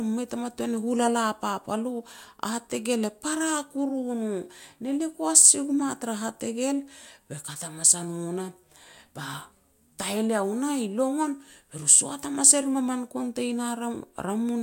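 No technical faults are audible anywhere in the recording.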